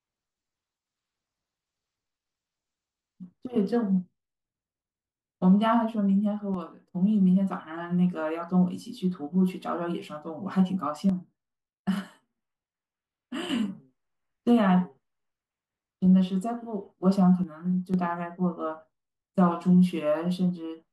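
Three times the level falls abruptly by about 6 dB and then snaps back: from 6.54 to 6.87 s, from 11.09 to 13.49 s, and from 17.44 to 17.94 s. The likely cause is one channel drops out, so the mono sum loses half its contribution. Unlike a fade or gain ride, the step is instant at both edges, and the sound never falls to silence as it would in a full dropout.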